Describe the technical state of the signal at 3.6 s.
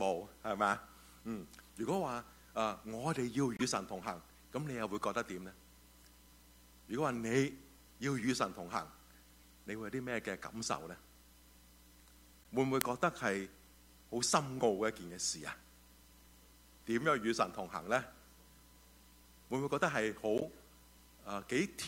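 A corrupt frame decoded from 3.57 to 3.62 s: flipped bits in one compressed frame misplace energy in frequency, giving a brief chirp-like blip peaking around -25 dBFS.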